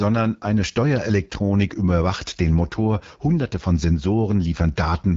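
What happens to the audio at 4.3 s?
At 4.3 s the speech is still carrying the AMR wideband (HD Voice) codec damage that runs through the whole clip. The codec models speech up to 6.4 kHz as pulses driving a vocal-tract filter and fills the band above that with shaped noise, so nothing appears above about 7.5 kHz. The damage is plainly audible as a rough, raspy texture, which fits one of the codec's lowest rates, around 8.85 kbit/s.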